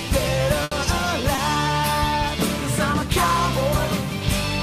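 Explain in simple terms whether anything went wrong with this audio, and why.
Two things went wrong, both caused by data getting lost on the way.

At 0.63 to 0.73 s there is a burst of packet loss. The sound freezes and fades briefly, then jumps ahead. About 80 ms of audio never arrived, so the receiver stretched out the last sound to cover the gap.

At 1.35 to 1.39 s there is a short concealed packet loss, heard as a quick smear or wobble. About 20 ms went missing, and the receiver patched the hole by continuing the previous sound before blending back in.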